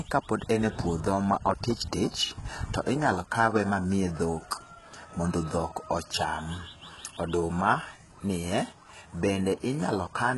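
From start to end, the treble sounds synthetic and gritty, likely from heavy HE-AAC compression near 12 kbps. Copied-up bands replace real highs, and nothing remains above 11.5 kHz.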